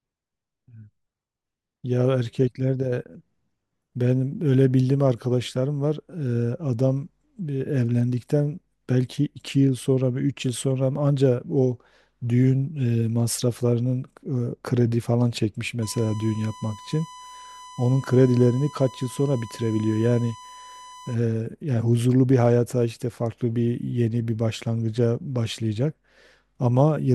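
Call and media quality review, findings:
USB whine, 15.82 to 21.15 s. Fixed-pitch tone at 1 kHz, about 20 dB below the speech. Probable component: USB audio interface or its power/ground path. Mechanism: current drawn in 1 ms bus frames couples into the analogue supply or ground, leaving a 1 kHz tone under the speech.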